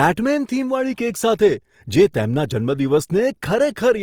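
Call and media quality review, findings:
Grainy, rough texture on the speech, whole clip, start to end. Likely Opus compression in its music (CELT) mode: each band's energy kept, starved bands filled with folded or noise content, so tone turns granular. Full bandwidth retained, content up to about 20.4 kHz. Damage plainly audible, which fits roughly 24 kbps. Versus MP3: less swirl, fewer spectral holes. Versus Opus speech (SILK) mode: not muffled or hoarse.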